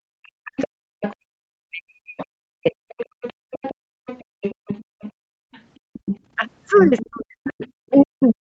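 Speech suppressed in double talk, from 0.0 to 2.73 s: the talker's speech dips and breaks up in pieces, about 2 s of that stretch in total, falling by roughly 40 dB at its deepest. This is likely the echo canceller hearing both sides at once, failing to tell the talker apart from the loudspeaker echo, and turning everything down.

The other side's voice leaking through, from 1.03 to 1.14 s: a brief scrap of a second voice comes through, about 15 dB below the talker. It returns at 2.17 s and stays to the end of the clip at a similar level. The canceller has likely left residual loudspeaker sound in the microphone signal rather than removing it fully.

Background gated by the echo canceller, from 3.06 to 5.93 s: the room sound drops out for about 0.7 s in total, falling by about 33 dB at the deepest point, then comes back. While the loudspeaker played, the canceller clamped the microphone hard, and the ambience disappears until it releases.

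Speech suppressed in double talk, from 3.87 to 4.99 s: the talker's speech dips again, for roughly 0.3 s in all, as deep as about 40 dB. It happens once more from 6.78 s to the end, overlapping the leaked voice. The call's microphone processing, with nothing above 8 kHz, is normal processing and not a fault.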